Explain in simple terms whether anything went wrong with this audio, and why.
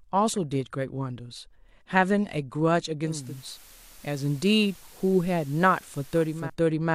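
At about 3.02 s the speech picks up a faint hiss, fading in over roughly 0.4 s and lasting until 6.56 s. That's digital radio blending to analogue: the radio lost its digital signal, slid over to the station's FM broadcast, then back.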